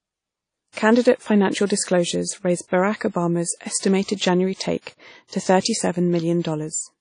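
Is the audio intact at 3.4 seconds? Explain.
No. At 3.4 s, as throughout the speech, there is a washy, ringing smear with hiss that swells and fades with the signal, and nothing above 10.1 kHz. This is likely WMA compression, consistent with about 32 kbps. Its long transform blocks spread quantisation noise over tens of milliseconds, which a plain low-pass filter would not do.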